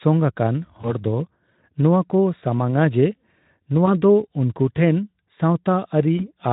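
At 0.81 s, 3.85 s and 6.17 s, VoIP packet loss concealed by the speech codec briefly smears the speech. Each gap sounds like a single lost 20 ms frame. The decoder fills it by repeating the last pitch and filter at falling gain. That makes a short stretched sound that fades. The damage lasts longer than the loss, about 0.12 to 0.15 s each time. Each rebuilt frame feeds the next. The light Speex coding underneath, at 15 kbps, carries that smear.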